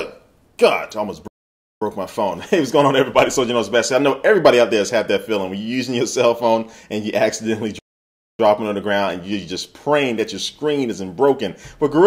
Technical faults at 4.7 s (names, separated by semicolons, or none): none